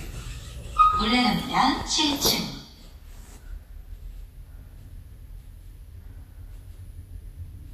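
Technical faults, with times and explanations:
Throughout, Vorbis compression: the sound is hissy and grainy across the whole clip, with roughened tones and smeared attacks, and nothing is present above 14.2 kHz. This is likely a low-quality Vorbis encode, at a rate that points to roughly 30-odd kbps. The encoder trims the top band and quantises the remaining treble so coarsely that fine detail is replaced by noise-like energy. A spectrogram shows a hard ceiling at 14.2 kHz and speckled, patchy texture beneath it.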